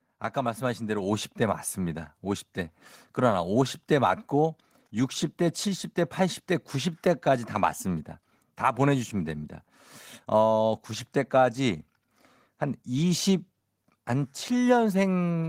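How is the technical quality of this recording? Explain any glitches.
There is one glitch. At 1.02 s the microphone volume is stepped up by about 4 dB in a single jump: the call software judged the input too quiet and raised the device gain at once. Voice and background noise rise together, which is different from a talker leaning closer, where the room noise would stay put.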